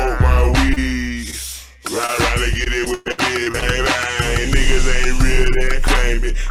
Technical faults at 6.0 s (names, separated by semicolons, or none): none